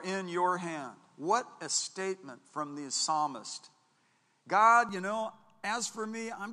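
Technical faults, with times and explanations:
0.00–4.89 s, input switched to a poorer device: the speech is band-limited, with nothing above 10.5 kHz, a faint noise floor well below the signal, and a level roughly 5 dB different from the rest of the clip. At 4.89 s, just before "you know", the sound opens up to full bandwidth with no gap. This is likely a mid-recording change of input device, whose narrower response, own gain and own background noise account for the duller opening section.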